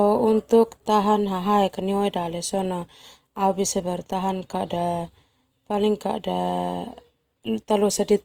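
Throughout, the speech sounds grainy, rough and noisy. The likely cause is Opus compression in CELT mode, filling starved bands with noise at a rate consistent with 24 kbps.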